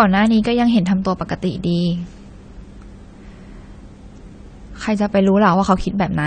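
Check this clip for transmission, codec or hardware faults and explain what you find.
AAC compression runs throughout the speech. Nothing sounds above 9 kHz, and sibilants come out dull, smeared and fizzy. The likely cause is AAC-LC at a rate that fits about 32 kbps, with the encoder dropping high bands and coarsely quantising the rest.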